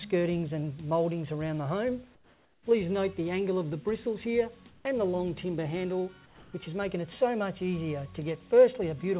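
The background drops out three times and is replaced by a flat, featureless hiss: from 2.15 to 2.66 s, about 7 dB quieter than the real background; from 4.7 to 4.85 s, about 4 dB quieter; and from 6.26 to 6.53 s, about 2 dB quieter. This is comfort noise in place of the background, likely from discontinuous transmission, where the sender goes silent during pauses and the receiver fills the gap with synthetic noise. At 2.64 s the returning sound starts abruptly, without its soft attack, because its first 20 ms are missing. That is likely an onset clipped by the voice detector, which was slow to notice the sound and left comfort noise in its place. Throughout the call path, nothing is heard above 4 kHz, which fits a narrowband G.711 codec.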